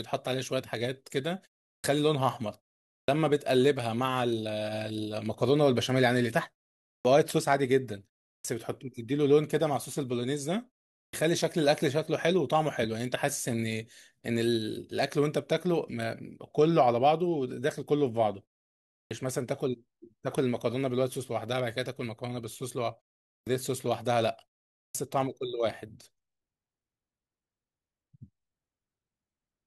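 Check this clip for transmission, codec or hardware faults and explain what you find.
One fault recurs, a clipped start after a pause, at 1.73, 2.96, 6.93, 8.34, 11.01, 19.0, 23.34 and 24.82 s. Each follows a silent gap of 0.33 to 0.61 s. During that gap the output device idles, and it needs time to wake and lock again. As a result, the first 0.11 to 0.13 s of the next phrase is lost, and speech snaps in abruptly without its opening sounds. The muted pauses themselves cost no speech.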